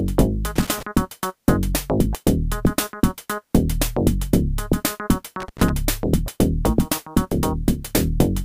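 Two short bursts of loose connector crackle, from 0.56 to 0.83 s and from 5.40 to 5.70 s, break up the sound: a worn contact making and breaking chops the signal into scratchy, uneven crackle.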